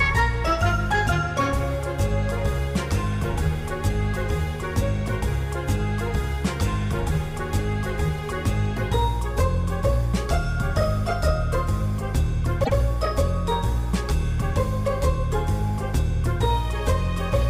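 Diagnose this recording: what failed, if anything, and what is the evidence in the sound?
A short stutter at 12.63 s: a block of about 104.5 ms, ending at 12.74 s, plays and then plays once more, so the same fraction of a second is heard twice and the audio runs 104.5 ms longer than it should. This is repeated frames at the storage or network stage. A run of compressed frames, which fits four frames, was written or sent twice, and the decoder faithfully played the duplicate.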